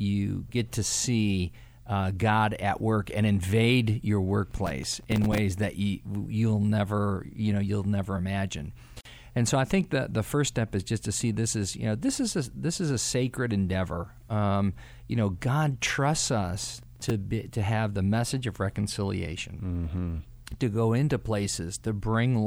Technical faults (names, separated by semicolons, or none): processor overload crackle; gap at a join of encoded pieces